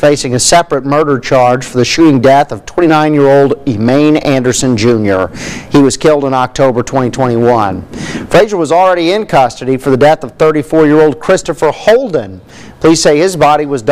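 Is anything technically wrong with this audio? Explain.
Yes. Hard clipping runs through the whole clip: the signal is driven about 19 dB past what a stage can pass, so peaks are sliced flat on roughly 7 percent of samples. Those squared tops add high harmonics, giving a harsh fuzz on every loud moment, unlike the rounder, warmer thickening of soft saturation.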